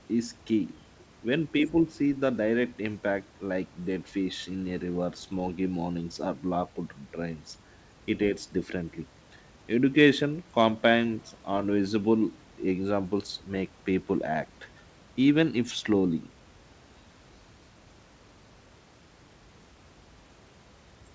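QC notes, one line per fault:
No faults heard in this speech clip.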